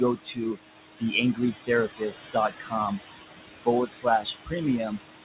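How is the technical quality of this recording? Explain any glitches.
The quality is held back by an aggressive noise suppressor. Room noise sits only about 6 dB below the speech, and the suppressor fights it hard.

Noise suppressor artifacts run through the whole clip. The suppressor pulls down each band it judges to be steady noise, frame by frame, by about 18 dB. So the background drops in the pauses and swells back under the speech.

Speech cut by the noise suppressor happens four times: 0.16 to 0.59 s, 1.34 to 1.7 s, 1.87 to 2.74 s, and 3.86 to 5.0 s. Here the suppressor mistook quiet parts of the speech for noise. It turned them down with the background, by about 18 to 21 dB at worst. Soft sounds and endings come out swallowed or faint. Only part of each span is hit, about a third of a second in the first and well over half a second in the last.

There is also a hard ceiling at 4 kHz, which fits a 64 kbps G.711 mu-law call path.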